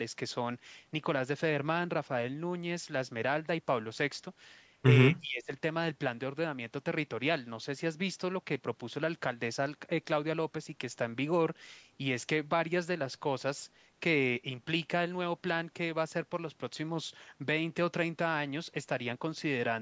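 From 5.21 to 5.51 s the speech abruptly sinks, dropping by roughly 20 dB for about a third of a second before recovering. This is speech suppressed in double talk, likely an echo canceller mistaking the near talker for loudspeaker echo while both sides spoke, with the band already topping out near 8 kHz.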